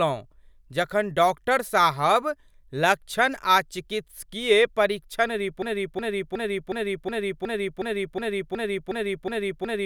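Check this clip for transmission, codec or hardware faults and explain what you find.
One fault is present: a broken-record loop running from 5.62 s to the end of the clip. From that point a fragment about 0.37 s long repeats exactly, back to back, twelve times, and the speech that should have followed never arrives. The likely cause is a stalled player, encoder or stream that kept resending the last fragment it held. Unlike an echo, the repeats do not decay or overlap. Each copy is identical and abutting, and nothing new is heard.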